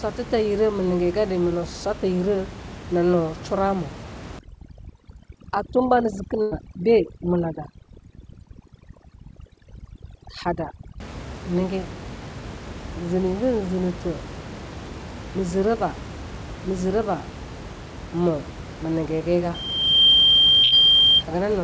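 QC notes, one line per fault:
4.39–11.00 s, overdone noise removal: The background drops and breaks up into twinkling specks. The room noise, which elsewhere sits about 15 dB below the speech, was suppressed far too hard. Individual frequency bands close to the estimated noise level were cut almost to nothing, and the quiet parts of the speech went with them. The bands that remain flicker on and off, which produces the specks.
6.42–6.53 s and 20.63–20.74 s, burst of packet loss: At each point the sound stalls into a held buzz or fading hiss, then picks up again further on with a piece missing. About 100 ms went missing the first time and 80 ms the second. The receiver covered the gaps by extending the last sound and fading it, for 93 ms and 87 ms respectively. The second burst lands inside the squeal.
19.54–21.23 s, loudspeaker feedback squeal: A single tone at 3.2 kHz swells over roughly 0.7 s into a squeal around 10 dB above the speech. 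The microphone was picking up the loudspeaker it fed, and at that frequency the loop gain rose above one. Each pass round the loop made the tone louder until it was limited or the loop was broken, and it stops at 21.23 s.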